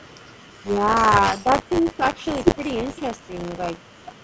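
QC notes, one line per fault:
throughout, buffer tearing: a steady 100 Hz robotic rattle rides only on the speech. A small slice of each period repeats audio from roughly 30 ms earlier, unlike one-off dropouts.
0.24 to 0.32 s and 3.93 to 4.03 s, background gated by the echo canceller: the room tone drops about 40 dB for a moment, then returns.
0.60 to 0.81 s, 1.43 to 2.31 s and 2.55 to 3.65 s, speech suppressed in double talk: the talker dips by roughly 15 to 20 dB, most likely because the canceller ducked both sides during overlap.
1.74 to 1.82 s, echo leak: a faint copy arrives 466 ms late, far below the speech. This is a separate delayed repeat, likely uncancelled loudspeaker pickup, not the 30 ms tearing repeat.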